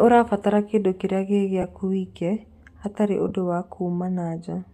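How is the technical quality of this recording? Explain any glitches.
There are two brief dropouts, both lost LE Audio frames. The first comes at 1.62 s, between "ũrabatara kĩndũ kĩrĩa gĩ" and "wike hatarĩ". The second runs from 3.28 to 3.32 s, right after "wike hatarĩ".

Both times the decoder filled the gap by repeating the last spectrum with scrambled phase. You hear a short grainy smear rather than silence, about 15 ms in the first and 22.5 ms in the second. Those lengths fit two and three 7.5 ms frames.

A faint breathy grain across the speech likely comes from the Bluetooth LC3 compression on the link.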